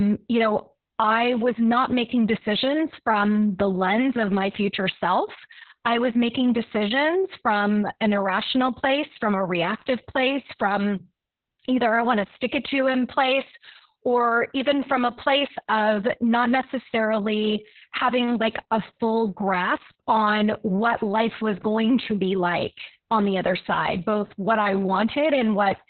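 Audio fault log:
throughout Opus voice compression: speech is muffled, with nothing above 4.3 kHz, and hoarse and robotic, as you'd expect from narrowband SILK coding at roughly 6 kbps.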